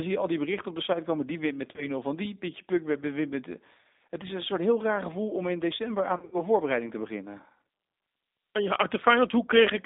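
From start to finish the audio carries the sound of the G.729 codec, plainly audible as a rough, slightly synthetic texture that fits its 8 kbit/s rate. The speech is rebuilt from a vocal tract filter, a pitch predictor and a few pulses in each frame. The line band runs only from 250 Hz to 3.7 kHz. On a spectrogram the energy stops sharply at 3.7 kHz, with an empty strip below 250 Hz, and the harmonics look smeared and grainy.

At 1.76 to 1.89 s comes VoIP packet loss concealed by the speech codec. The sound suggests about 20 ms went missing, consistent with two lost frames. The decoder stretched its last pitch and filter into a brief buzzy smear, and the audio stays weakened for a while afterwards as the frames rebuild. The waveform shows a short, dipping envelope, and the spectrogram shows flattened, repeated harmonics.

A longer episode of the same packet loss runs from 6.16 to 6.40 s, right after "om in december aan" and before "voorbereiding te beginnen". 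Around 130 ms is missing, scattered over 160 ms, with the longest gap 70 ms. This sounds like a stuttering, buzzy drone that fades. The spectrogram shows frozen horizontal harmonic bands, and the waveform shows repeated, decaying cycles.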